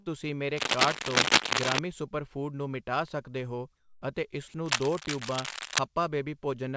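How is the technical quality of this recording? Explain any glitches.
The technical quality is compromised by three kinds of fault: scratching noise in two stretches and two short gaps where the real sound is replaced by synthetic noise. The speech is band-limited, with nothing above 8 kHz, which fits a G.722 call path at 64 kbps.

From 0.57 to 1.79 s and again from 4.65 to 5.80 s there is cable scratch noise: dense, irregular crackling and rustling laid over the speech. The first stretch is somewhat louder than the speech itself, and the second sits at roughly the same level. The likely cause is a worn cable, connector or control being moved, so that its contact resistance fluctuates rapidly and injects uneven bursts of noise into the signal.

From 3.76 to 4.02 s, about 260 ms, there is comfort noise in place of the background. The natural room background, which sits about 37 dB below the loudest speech, gives way to a smooth, featureless hiss about 2 dB quieter. 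The likely cause is the sender's voice detector judging this pause to be silence and halting transmission, with the receiver generating shaped noise to fill the gap until the sound resumes.

From 4.48 to 4.54 s there is sound dropped by the voice detector. About 60 ms is replaced by steady synthetic noise, and roughly 30 ms of actual speech is lost, so the sound briefly cuts out before returning. The likely cause is the detector mistaking the speech for background and stopping transmission. The receiver then substitutes comfort noise until the detector triggers again.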